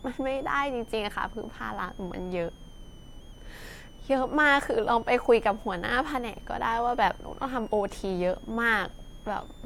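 A faint high whistle near 3 kHz, wandering between about 2.8 and 3.6 kHz, sits well below the speech throughout: switching supply whistle from a supply running in audible burst mode or beating with another supply.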